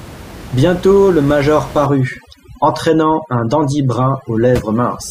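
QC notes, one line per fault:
1.86–5.10 s, overdone noise removal: just after "le major", the background drops and breaks up into twinkling specks. Set too hard against room noise about 16 dB down, the reducer mutes bands near its noise estimate, taking quiet speech detail too.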